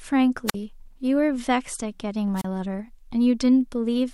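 Speech with two wireless microphone squelch dropouts, at 0.47–0.54 s and 2.36–2.45 s: the radio signal fades, and the receiver mutes the output for about 45 ms and 31 ms.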